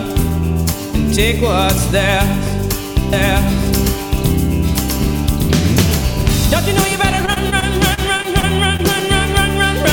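From 3.13 to 6.59 s a doubled audio track appears: an equally loud, dry copy trails about a second behind and cuts in and out abruptly, likely from a second, slower capture path. Its lack of decay or room colour sets it apart from echo. Between 7.25 and 8.80 s, repeated packet loss turns the sound choppy and robotic. The holes, up to 34 ms each, are patched by stretching the preceding sound, unlike clean silent dropouts.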